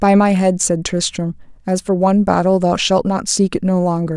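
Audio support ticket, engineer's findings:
No fault found on listening to the speech clip. No symptom to trace to any component in the chain.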